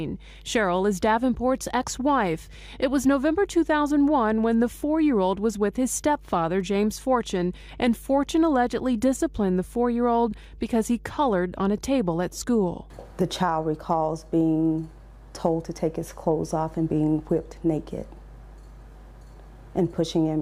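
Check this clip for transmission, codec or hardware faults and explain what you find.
One hardware fault runs through the whole clip. Mains hum: a steady low 50 Hz tone with some low harmonics, about 20 dB below the audio, from a ground loop or nearby transformer coupling the power line in.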